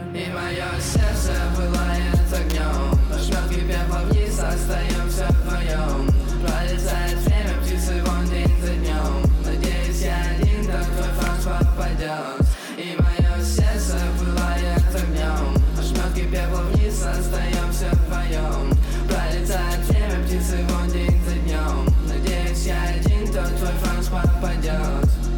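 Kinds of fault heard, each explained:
Electrical switching spike: sharp snaps at 2.50 s and 11.27 s, each lasting under 20 ms and peaking at about -10 dBFS, laid over the sound. These are likely short arcs from a nearby switch, motor or static discharge, picked up by the audio line.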